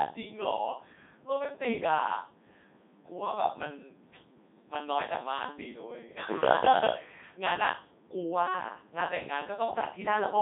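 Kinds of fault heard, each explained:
Codec 2 vocoder: speech is rebuilt from sine waves driven by pitch, voicing, energy and spectral envelope, so the waveform is lost. It sounds heavily robotic and buzzy, confined to 150 Hz–3.7 kHz with nothing above 3.8 kHz, which fits the 3.2 kbit/s mode.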